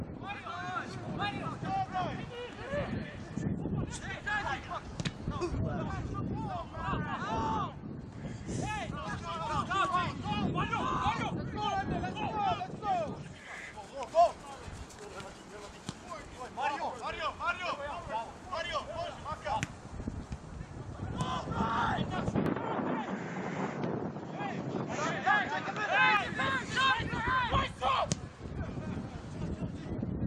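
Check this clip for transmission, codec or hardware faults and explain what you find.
One fault stands out. From 22.46 s to 26.17 s there is an input switched to a poorer device. The recording likely changed its input to a narrower-band microphone or headset mid-take and then switched back. For that stretch nothing above 7.6 kHz gets through, so the audio turns dull and boxy. Its level shifts by roughly 5 dB, and a new noise floor appears somewhere around 35 dB below the signal. There is no gap at either switch; the tone simply changes abruptly.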